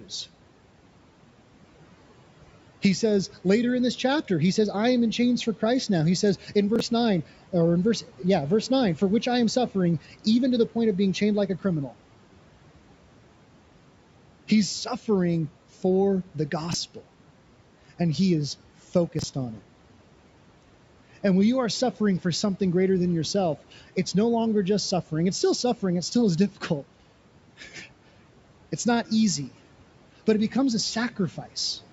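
A brief jumbled stutter breaks the speech at 6.76–6.80 s after "says in", at 16.71–16.74 s after "suffering for the", and at 19.19–19.24 s before "on it". These are chunks out of order: a block of about 11.6 ms played three, two and three blocks late.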